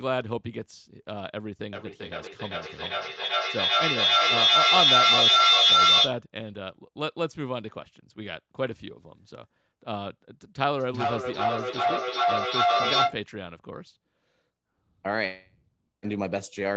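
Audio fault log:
1.72 to 6.22 s, feedback howl: A steady tone near 4 kHz swells to about 9 dB above the speech, with the loop coming round roughly every 0.4 s. Two devices in the same room share the call, and each pass from loudspeaker to microphone adds level, so the sound narrows to the one frequency the loop favours and keeps building. Unlike echo, it settles into a sustained pitched tone.
10.74 to 13.24 s, feedback echo between two devices: The speech comes back as repeats spaced roughly 0.4 s apart, each thinner and more ringing than the last, and they stack to about 6 dB above the direct speech. Here one device plays what the other's microphone captured, and that microphone picks it up again. Its echo canceller removes only its own playback, so the returned sound loops. Unlike the howl, the repeats still follow the shape of the speech rather than settling on a single tone.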